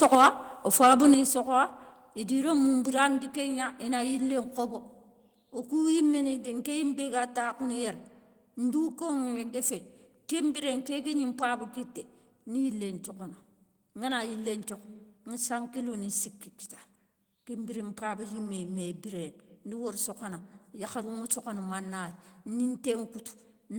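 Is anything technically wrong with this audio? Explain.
Yes, the speech has microphone overload from 0.02 to 0.28 s and 0.73 to 1.12 s, likely from input gain about 6 dB too high. Peaks flatten against the converter ceiling, giving harsh crackle and flat-topped waveform tops with broadband spectrogram smear.

Microphone volume stepped down at 0.15, 1.14 and 3.18 s, by about 4, 6 and 2 dB, likely the call software cutting input gain. Level drops abruptly, visible as sudden waveform envelope steps.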